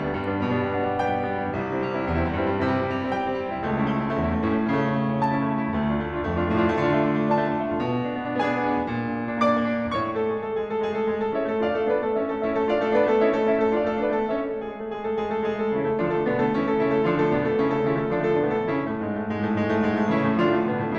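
Nothing stood out on listening to this music.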